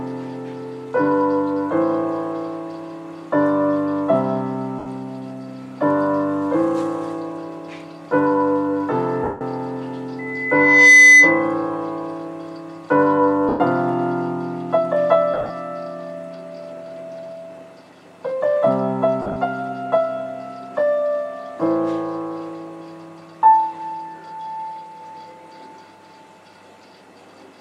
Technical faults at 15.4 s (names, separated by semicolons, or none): lost LE Audio frames